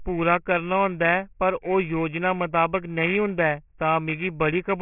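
Aliasing runs through the whole clip. The audio was brought down to a much lower sample rate without filtering first. The sound points to a rate near 6 kHz, so the band stops at 3 kHz. Speech energy above that point folds back below it at false pitches. The folded content sits only around 10 dB under the speech. Sibilants come out gritty and metallic, and the spectrum stays full right up to 3 kHz.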